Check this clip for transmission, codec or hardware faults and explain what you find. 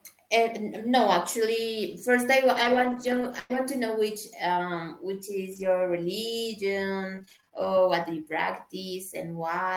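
Two faults are audible in this speech. Between 2.55 and 7.63 s, brief ticks, smears and small hiccups turn up here and there while the speech stays largely clear. These are scattered short gaps: around ten lost or late packets, totalling 300 ms and none longer than about a tenth of a second, each patched by the receiver extending the preceding sound.

From 7.53 to 7.84 s the speech drags, running at 90% speed with unchanged pitch and slightly stretched sounds. This is a jitter buffer slow-down: the receiver repeated pitch periods to add 37 ms and rebuild its reserve of buffered audio.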